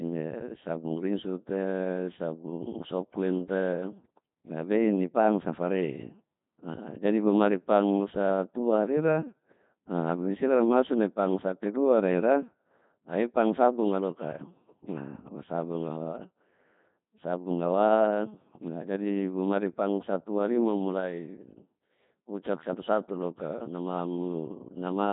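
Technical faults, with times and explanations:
Throughout, Codec 2 vocoder: the speech is rebuilt from pitch and spectral-envelope data as synthetic sine waves, hence the buzzy, robotic tone, nothing above 3.8 kHz, and heavy damage fitting about 2.4 kbit/s.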